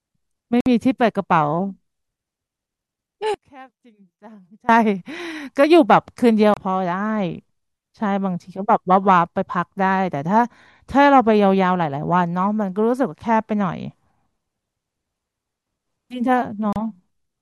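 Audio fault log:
0.61, 6.54 and 16.73 s: Bluetooth stall. The speech cuts out for 56, 28 and 32 ms, then carries on, likely the headphone buffer running dry while delayed packets were resent.
3.34 to 4.69 s: one channel inverted. The speech drops by about 26 dB to a faint ghost, likely one side's polarity flipped so the centred voice cancels in mono.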